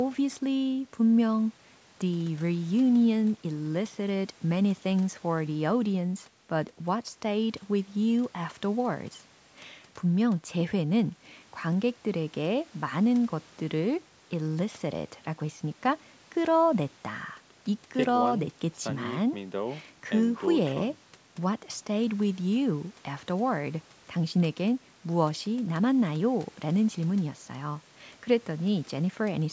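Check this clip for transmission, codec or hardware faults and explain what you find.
No transmission, codec or hardware faults can be heard in this speech recording. It has passed through a call's microphone processing, which rolls off the lowest bass and leaves nothing above 8 kHz, as that stage normally does.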